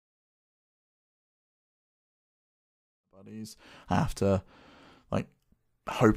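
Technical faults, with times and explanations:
No technical faults are present; the level rises gradually from around 3 s to full at 4.33 s as an editor's fade-in would, with no click or hard edge.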